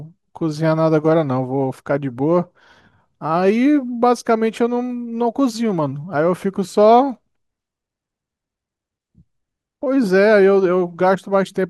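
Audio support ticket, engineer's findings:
No audio fault found in this speech clip; nothing to report for the ticket.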